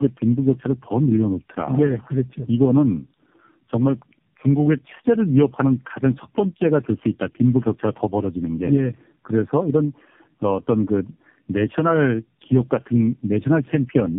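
Speech running through tandem speech coding for its whole length: the audio sounds as though it passed through an AMR-NB-style narrowband coder three times in a row, decoded and re-encoded at each hop, with nothing above 3.6 kHz. The roughness, muffling and warble compound beyond what one low-rate pass would leave, with the grit and smearing of several low-bitrate stages stacked together. That accumulated texture distinguishes it from a single narrowband or heavily compressed codec.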